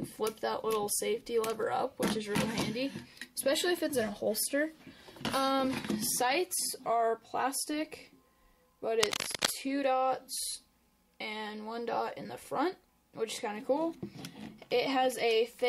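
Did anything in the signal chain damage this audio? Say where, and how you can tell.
Yes. From 9.0 to 9.5 s a dense, uneven scratching rustle sits over the sound, roughly as loud as the signal itself. This is cable scratch noise in the analogue wiring, likely a worn cable, connector or control being moved so its contact resistance fluctuated rapidly.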